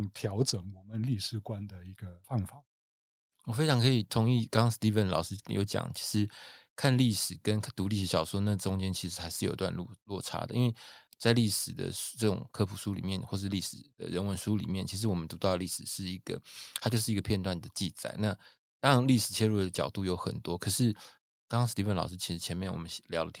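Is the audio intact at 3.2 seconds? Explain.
Yes, at 3.2 seconds the speech plays through intact, with no dropout, click, distortion or other fault at that moment.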